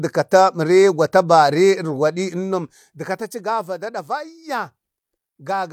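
Zipper noise, 2.22 to 3.67 s: the speech level drops about 15 dB in unsmoothed 1 dB steps, around ten per second, each step adding a tick.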